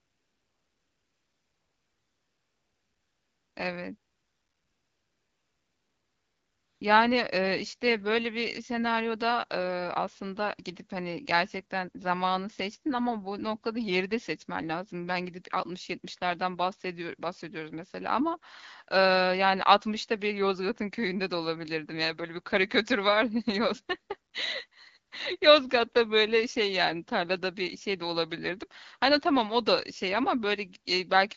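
A smooth, steady hiss replaces the real background from 0.00 to 3.55 s and again from 3.97 to 6.81 s, then flickers in briefly at 24.31 to 24.33 s and 24.67 to 24.71 s. This is AMR comfort noise. The phone treated these stretches as silence and stopped sending speech frames, so the receiver synthesised filler noise from a rough level and spectrum estimate. The filler switches in and out against the light AMR-WB coding around it.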